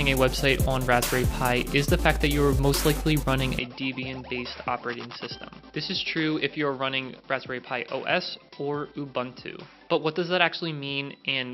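An input switched to a poorer device at 3.59 s, lasting to the end of the recording. With no gap at the change, the sound abruptly turns duller and boxier, with nothing above 5.6 kHz, and drops a few decibels in level. A faint new background noise, well below the signal, comes in at the same moment. The likely cause is the system moving its input mid-recording to a narrower-band microphone or a headset's call profile, which has its own tone and noise.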